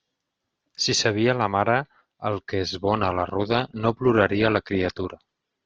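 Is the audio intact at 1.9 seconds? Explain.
Yes, at 1.9 seconds the speech plays through cleanly with no audible fault.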